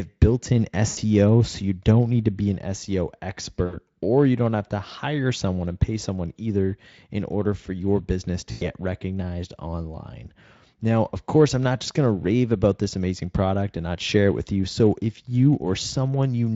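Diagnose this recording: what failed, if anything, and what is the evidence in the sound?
Buzzy or noisy, fading smears at 0.87–0.99 s after "built in", 3.65–3.79 s before "or you don't have", and 8.51–8.72 s after "order for your business": network packet loss concealed by the speech codec, which extrapolated 80–100 ms gaps from its last pitch and filter, with decaying gain.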